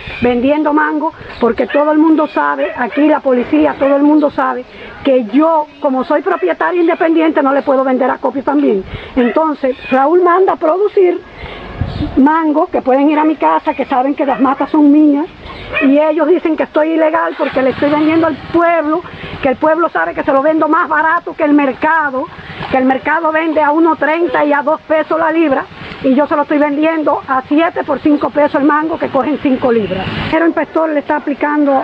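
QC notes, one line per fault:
Nothing to log here: no faults turned up anywhere in this one.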